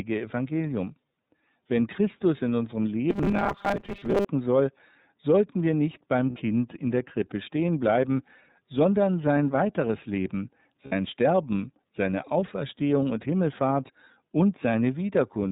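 The iLBC codec runs throughout this speech clip. Its 30 ms frames at 13.33 kbps cut everything above 4 kHz and leave the voice audibly rough and synthetic.

Robotic sound from repeated short buffers appears from 3.10 to 4.26 s, after "in unserem" and before "soll sollten wir nicht". A rigid 200 Hz metallic buzz follows the speech loosely. This is likely from 5 ms chunks being replayed while about half the real audio is skipped.

Lost iLBC frames occur at 6.30 s, between "sollten wir nicht beim" and "in der", and again at 10.86 s. Each 60 ms gap, which fits two missing 30 ms frames, is bridged by a held, buzzy vowel before clean recovery.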